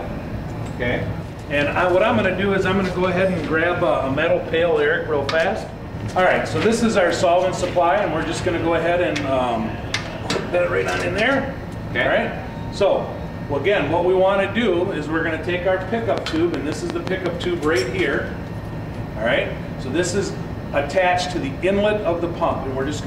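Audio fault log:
16.18–17.45 s: train of clicks. A run of about seven near-identical sharp pulses arrives at a steady 5.55 clicks per second, heard as regular ticking laid over the sound rather than as part of it. The peaks stand roughly 15 dB above the surrounding signal. The matching shape and even spacing point to a repeating external disturbance, likely interference from nearby equipment or a faulty connection or power supply injecting pulses into the path.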